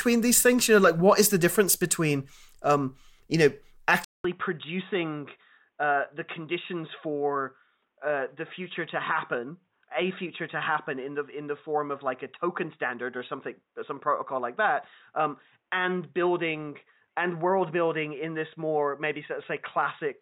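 Input switched to a poorer device at 4.04 s, after "between um you know": a 200 ms gap, then audio capped at 3.8 kHz, about 10 dB quieter, likely a lower-grade microphone.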